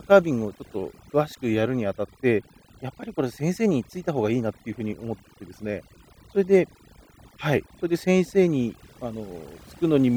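Speech with overdone noise removal running throughout: the reduction is set so hard that bands near the noise estimate are pulled down or gated out, leaving near-silent gaps with twinkling specks. A spectrogram shows scattered isolated blips in the background and ragged, hollowed-out holes through the weaker parts of the voice.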